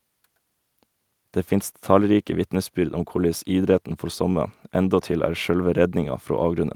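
No technical faults can be heard anywhere in the speech. Nothing in the audio breaks, drops out or changes character at any point.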